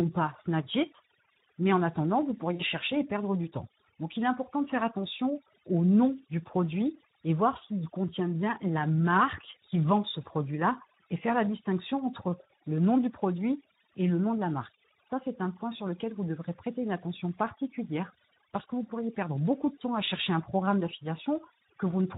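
Right from the start there's overdone noise removal across the whole clip. The denoiser was pushed so hard that any frequency band sitting close to its noise estimate gets pulled almost to nothing, and the softer parts of the speech get dragged down with it. Between phrases the background drops to near silence with little twinkling specks.

Also running the whole way through is Speex codec damage, and it's plainly audible. The hoarse, grainy quality fits a low middle setting of around 11 kbps, where the codec just doesn't have enough bits to rebuild the excitation signal cleanly. Anything up in the high band above 4 kHz sounds like shaped hiss rather than real detail.

At 2.55 to 2.63 s, right after "en attendant vous" and just before "chercher et perdre du", you get VoIP packet loss concealed by the speech codec. About 40 ms of audio is missing, which fits two lost 20 ms frames. The decoder fills the hole by carrying its last pitch and filter forward at decreasing gain, so the sound smears into a brief buzzy tone or coloured noise that fades. 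Because each frame builds on the previous one, the speech stays weak or distorted for a moment after the audio comes back.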